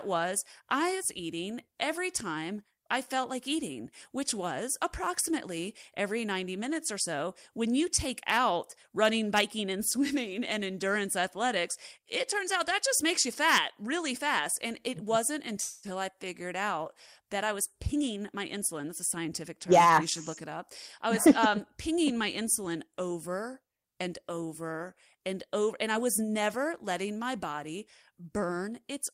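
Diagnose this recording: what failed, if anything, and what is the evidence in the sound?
Network and jitter buffer stage. A call audio freeze runs from 15.61 to 15.86 s. The last sound is stretched into a fading buzz for 216 ms. Then the speech resumes where it stopped, with nothing lost. Held-up packets likely emptied the buffer.

Same stage, later. A jitter buffer speed-up starts at 17.77 s, right after "out that I was", and lasts until 19.91 s. Speech runs about 8% fast at unchanged pitch and sounds hurried. The receiver cut pitch-period slices, roughly a fifth of a second in total, to shed the backlog.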